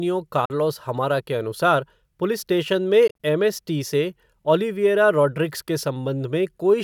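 Speech with two short holes where the sound cuts to silence and resumes further along, as though it had kept playing underneath. The first runs from 0.45 to 0.50 s, with about 44 ms missing. The second, between 3.08 and 3.20 s, is broken into several gaps totalling about 73 ms, the longest 44 ms. This is likely a Bluetooth dropout: packets reached the headphones too late and were discarded, leaving silence until good data arrived.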